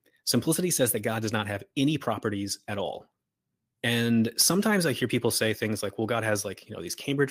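Nothing in the recording stood out as a technical problem on listening.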